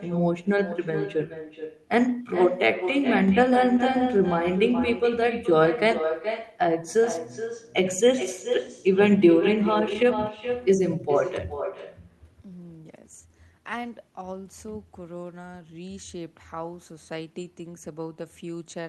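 The clip is speech, and it carries an echo with no canceller from start to finish. Every phrase returns as a second copy a little under half a second later. That copy sits about 9 dB below the talker and sounds thinner. The far end is playing the call through a loudspeaker. Its microphone picks that sound up and sends it back across the network, and nothing removes it. The call codec's top end, which reaches about 12 kHz, also shapes that returning copy.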